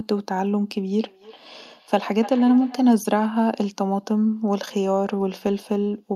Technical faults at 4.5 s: none

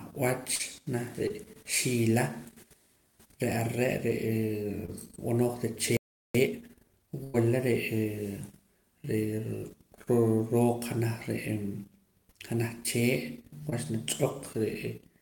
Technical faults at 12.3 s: none

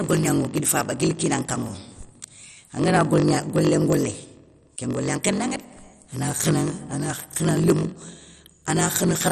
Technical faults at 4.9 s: block size mismatch (padded); MP2 compression

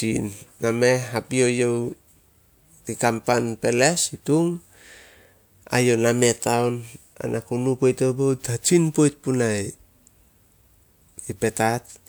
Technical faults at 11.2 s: none

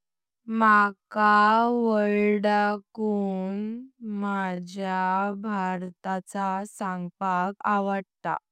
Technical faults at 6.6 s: none

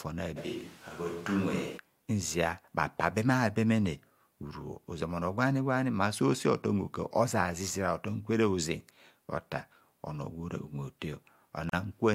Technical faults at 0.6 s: switch to a distant microphone

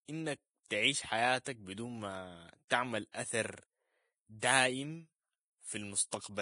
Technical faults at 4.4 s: Vorbis compression; pre-echo

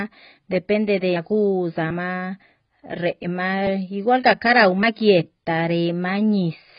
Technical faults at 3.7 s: AAC compression; dropped buffer (overrun)

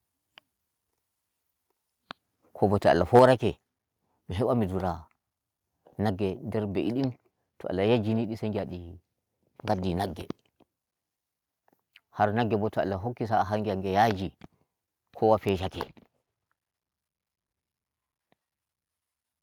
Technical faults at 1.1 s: none

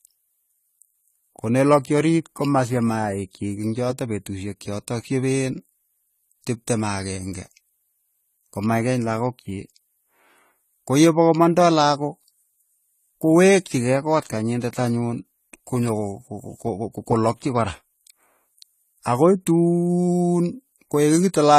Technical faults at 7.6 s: AAC compression

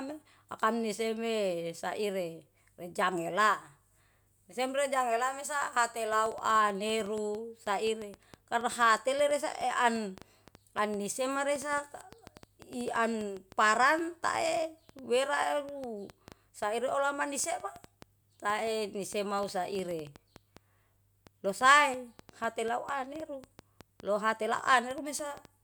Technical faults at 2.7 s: none

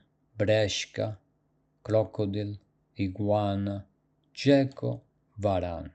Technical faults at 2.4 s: none

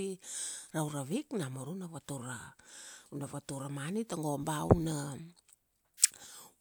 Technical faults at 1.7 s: none

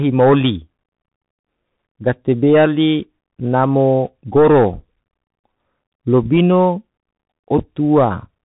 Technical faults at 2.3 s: Bluetooth CVSD headset codec

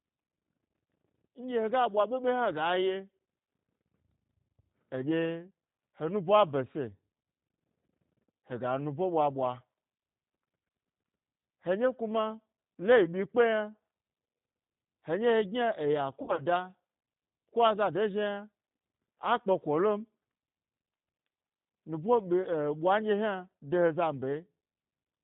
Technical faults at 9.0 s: G.729 codec

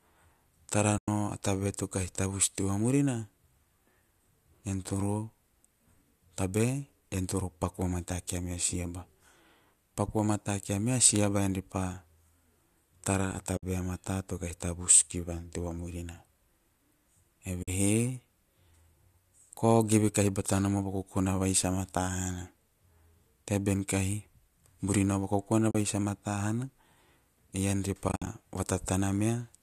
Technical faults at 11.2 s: repeated buffer

